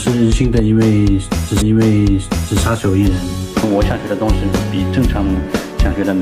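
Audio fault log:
1.60–2.60 s, stream segment repeated: the player queued one segment twice, so about 1.0 s of audio plays again after a short blip at the jump back. On a waveform or spectrogram, the same one-second pattern appears twice in succession, joined by a narrow discontinuity.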